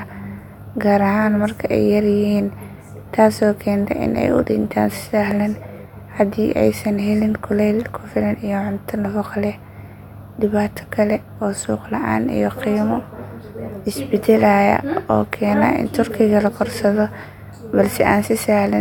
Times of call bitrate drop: none

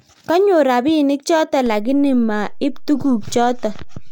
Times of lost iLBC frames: none

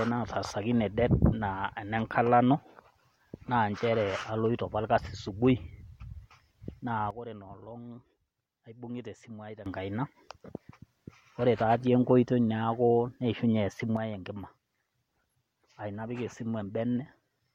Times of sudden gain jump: 7.11-9.66, 13.97-17.55

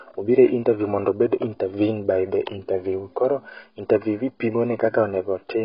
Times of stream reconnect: none

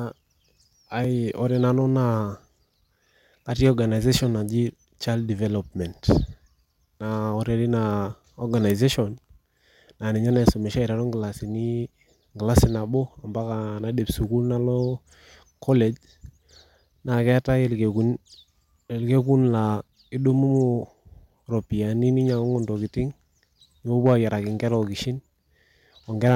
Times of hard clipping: 3.65-3.69, 6.10, 10.36-10.49, 12.57-12.64, 24.06-24.13, 26.26-26.35

